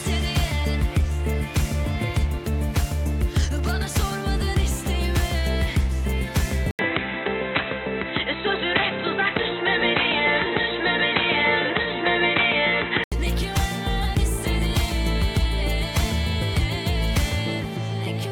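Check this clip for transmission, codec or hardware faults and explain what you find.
One fault is present. From 6.71 to 13.12 s, the sound turns dull and boxy, with nothing above 4 kHz. An 80 ms silence marks the switch. This is likely an input switched to a poorer device. Its narrower band and faint new background noise replace the original, at unchanged level.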